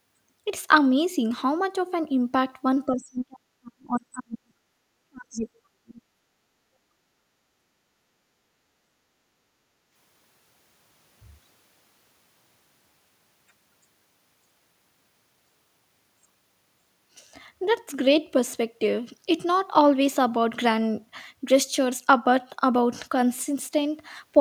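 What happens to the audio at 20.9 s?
Nothing goes wrong at 20.9 s; the speech continues there without any audible fault.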